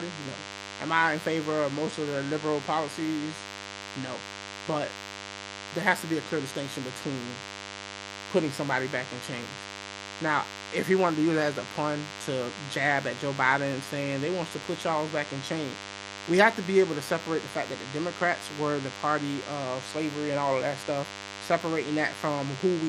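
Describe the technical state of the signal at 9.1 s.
At 9.1 s the speech carries DECT cordless phone buzz, present across the whole clip. A nearby handset or base pulses radio bursts 100 times per second, which the audio circuit rectifies into a thin, harmonic-rich 100 Hz buzz sitting fairly close under the speech, edgier than smooth mains hum.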